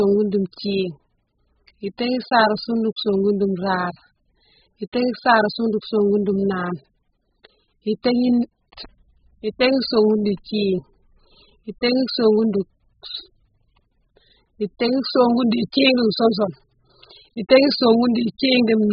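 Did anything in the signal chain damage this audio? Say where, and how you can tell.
Yes: AAC compression throughout, at the codec stage. Nothing survives above 5.1 kHz and the speech is heavily smeared, likely AAC-LC starved of bits, fitting roughly 8 kbps.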